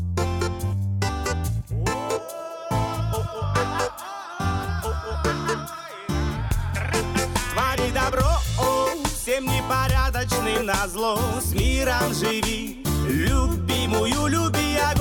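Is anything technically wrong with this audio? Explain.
Yes. There is one fault, a corrupt frame decoded, from 9.19 to 9.22 s. For about 20 ms a short blip is heard. It peaks around -20 dBFS. Bits inside a compressed frame were damaged, but the decoder played the frame anyway. It read wrong gains or codes and put energy at frequencies where none belonged. The damage spans a couple of frames, so the artefact lasts only that long. It is heard as a brief chirp of noise.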